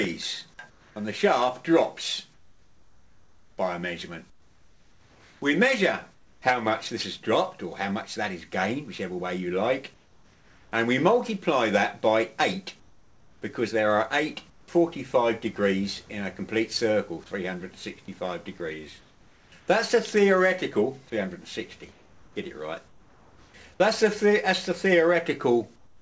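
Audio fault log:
0.70–0.96, 2.34–6.42, 9.94–10.72, 12.80–13.42, 14.50–14.68, 19.00–19.68, 21.92–23.54 and 25.76–26.02 s: comfort noise in place of the background. In each pause the real background drops out and a flat, featureless hiss takes its place, in some pauses about 3 to 6 dB quieter. This is likely because the sender stopped transmitting during silence and the receiver filled each gap with synthetic noise.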